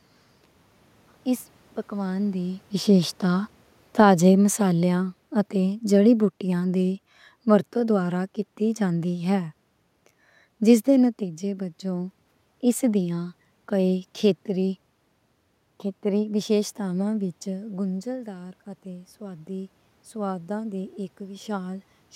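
From 2.80 to 9.05 s, just after "اس پکوان دی", automatic gain falling sets in. The talker moved around 2 s, the control judged the input too loud, and it eased its gain down by about 7 dB. Unlike a talker moving, the room noise sinks along with the speech.

From 17.47 to 21.94 s, after "ویشیشتاواں وِچ", automatic gain rising follows a talker moving away near 17.5 s, which dropped the input by about 12 dB. The gain climbs about 6 dB over several seconds, and the room noise swells with the speech, which a change in distance alone would not cause.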